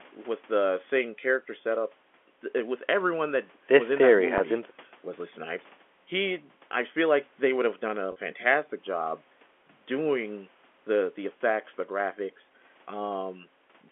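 Packet loss with pitch repetition occurs twice over the telephone-band line. From 4.38 to 4.40 s about 20 ms of audio goes missing, which fits one lost packet, and from 8.12 to 8.16 s about 40 ms disappears, which points to two in a row. Each time the receiver fills the hole by repeating the last pitch period, so the speech briefly holds on a slightly buzzy, frozen tone before resuming, a little longer at the second gap.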